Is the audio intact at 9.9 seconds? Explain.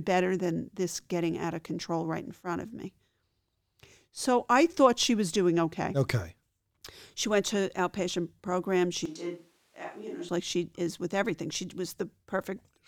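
No. From 9.06 to 10.29 s there is a switch to a distant microphone: the close microphone's feed likely dropped out, so the recording fell back to one farther from the speaker. At 9.9 s the voice is abruptly roomy and hollow, thinner in the bass, about 5 dB quieter, with room noise rising to around 30 dB below the speech. At 10.29 s it snaps straight back to the close sound.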